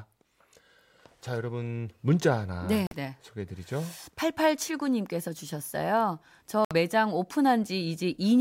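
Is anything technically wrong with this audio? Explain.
Yes. The speech has two short holes where the output goes silent: one from 2.87 to 2.96 s and another from 6.65 to 6.74 s, each about 90 ms long. These are likely Bluetooth dropouts. Audio packets arrive too late for the headphones to play, so they are discarded and nothing is output until valid data returns. The gaps start and stop abruptly or with a fade of a few milliseconds, and the speech picks up further along, as if it had kept running through the silence.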